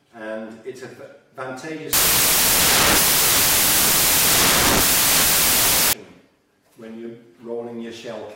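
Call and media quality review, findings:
Sample decoding fault, samples built from the wrong bytes, 1.93–5.93 s. Reader misassembles each sample's bytes (offset, swapped order or wrong alignment), promoting noisy low bits to the top of each value. Result: loud, harsh broadband noise, close to white on loud passages.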